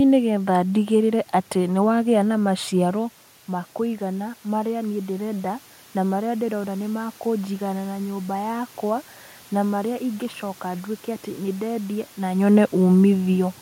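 Between 2.45 and 6.86 s there is automatic gain rising: the input drops by about 12 dB as the talker moves away near 3 s, and the gain control gradually adds about 5 dB, swelling voice and room noise alike. The waveform envelope and spectrogram noise floor ramp upward.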